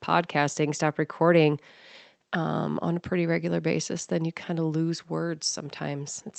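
Nothing stood out on listening to this speech clip, which comes across as ordinary call audio with the top end limited to about 8 kHz by the Opus codec.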